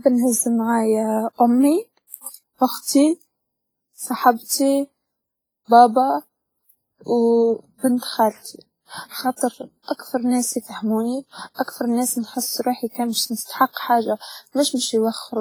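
Throughout the speech there is heavy damage that is likely WMA compression. Quiet detail is stripped away, and the remaining sound rings and washes, with a hiss that rises and falls with the signal. This fits a low bitrate of around 24 kbps.

Pre-echo occurs at 2.30–2.34 s, 4.45–4.50 s, 7.97–8.02 s, 9.36–9.41 s and 13.44–13.49 s. In each case, quantisation noise sized for a sharp attack is spread back across the quiet gap before it. This produces a 45–50 ms hiss ahead of the onset and softens the attack.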